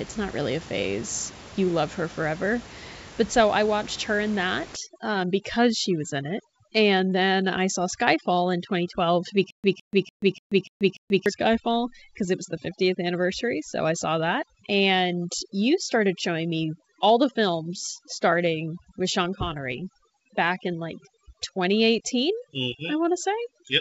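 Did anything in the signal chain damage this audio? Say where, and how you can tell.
Yes. From 4.76 s, just after "I watched her in", to the end, overdone noise removal in the processing stage has damaged the sound. The room noise, about 19 dB below the voice, drops and breaks up into twinkling specks. On a spectrogram the noise floor becomes scattered flickering dots, with holes cut into the weaker speech bands.

Between 9.50 and 11.26 s there is a stutter with silent gaps. A 159 ms fragment repeats six times, each followed by about 134 ms of digital silence, at a steady 0.29 s period. The waveform shows identical blocks separated by flat silent stretches. The likely cause is a playback or stream stall replaying its last buffer, so the audio that belonged in that stretch is lost.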